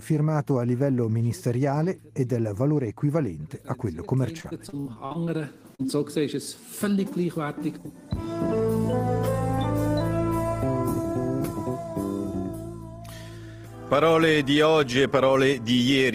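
Between 4.37 and 5.29 s the audio turns choppy and robotic: repeated packet loss leaves gaps of up to 50 ms, patched by extending earlier sound, covering about a quarter of that span. Just after, at 5.75–5.88 s and again at 5.83–5.86 s, short concealed packet loss of roughly 40 ms and 20 ms is smeared over with synthesized continuation, the first adding a slight stretch of around 10 ms.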